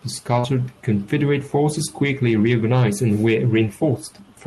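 At 0.39 to 0.45 s there is a short concealed packet loss: roughly 40 ms of the call never reached the decoder in time, and the receiver covered about 33 ms of that gap by extending the preceding sound before blending back into the real speech. It comes across as a brief smeared wobble in the speech. On a spectrogram the preceding sound runs on across that slot, then shifts at the rejoin. The call path itself, whose spectrum stops near 12 kHz in a way that fits a super-wideband call codec such as Opus, runs through this stretch as well.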